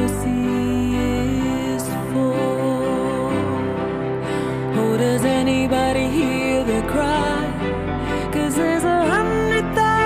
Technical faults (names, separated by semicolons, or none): none